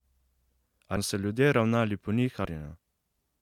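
Whole compressed frames were skipped twice, either missing from the stream or rejected by the decoder as damaged, so the speech jumps forward by a whole number of 23.2 ms frames. At 0.95 s roughly a third of a second vanishes, which fits around ten frames. At 2.44 s, just after "ravnali po", a similar stretch drops out, consistent with about fifteen frames.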